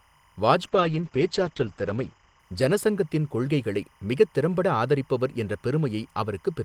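Throughout the speech, linear timecode from a neighbouring track or cable leaks in as timecode bleed. Its square wave flips between 1 and 2 kHz at a 25-frame rate, roughly 35 dB below the speech, giving a faint steady chirping warble underneath.

From 0.64 to 3.97 s, a call bitrate drop occurs. The bandwidth estimate fell and the encoder coded far more coarsely, which fits a fall from 40 to 10 kbps. The top end shrinks from 20 kHz to 8 kHz, with the worst stretch lasting 1.26 s. The speech sounds muffled and rough until it recovers just before "மிகத் திறம்பட ஆதரிப்பவர்".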